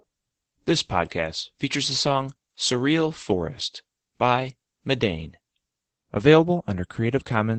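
Throughout the speech, Opus voice compression is plainly audible. Nothing survives above 8.5 kHz, so the voice sounds muffled, and the coarsely coded SILK excitation gives it a hoarse, slightly robotic edge, which fits a low bitrate around 12 kbps in wideband mode.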